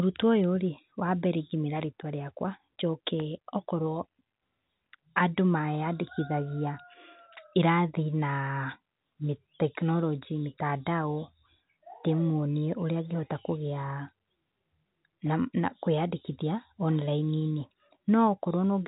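Speech over a telephone line, with nothing technically wrong.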